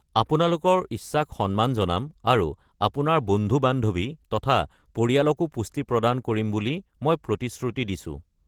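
From start to finish, the speech has passed through Opus voice compression run at a low rate, which fits roughly 16 kbps in hybrid mode: a linear-prediction coder carries the band below 8 kHz while a transform layer covers the range above, up to about 21.9 kHz. With so few bits, the excitation is coded coarsely, so the voice sounds plainly hoarse and slightly robotic.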